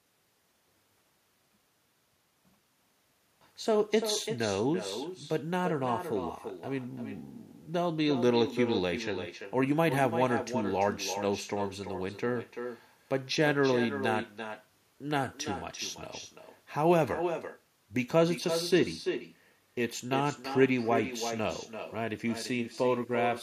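From start to finish, every phrase is trailed by a second, fainter copy of itself arriving around a third of a second later, sitting about 8 dB below the direct speech and sounding thinner. This is echo with no canceller: the far end is playing the call through a loudspeaker, its microphone captures that playback, and nothing strips it out, so the talker's own voice returns after the network round trip.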